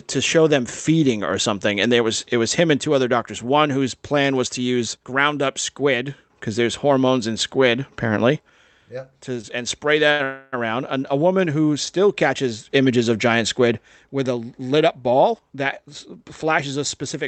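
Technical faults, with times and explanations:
9.41 s and 10.11 to 10.21 s, short stall from a late packet: The sound is held too long twice, for 19 ms just before "and spray" and for 81 ms just after it. Each time a packet was late and the jitter buffer ran empty. The receiver stretched the last sound, then resumed from the same place, so nothing is lost.
10.23 to 10.55 s, call audio freeze: The last sound is carried on as a fading fill for 290 ms, with no silent stretch, and the audio then picks up where it stopped. The likely cause is packets held up in transit, which emptied the jitter buffer. A gap is inserted, but nothing is missing.
14.31 to 15.95 s, jitter buffer speed-up: Right after "of giant squid with", the speech runs at about 110% speed but keeps its pitch, so it sounds hurried. The buffer held too much audio. To cut the delay, the receiver trimmed short pitch-period pieces repeatedly, around 150 ms in total.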